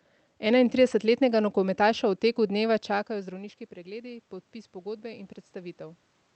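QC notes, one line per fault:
2.36 to 6.08 s, automatic gain rising: after "nogometaša v" the input drops by about 16 dB as the talker moves away around 2.5 s. The gain control slowly adds about 5 dB, so voice and room noise swell together over nearly four seconds.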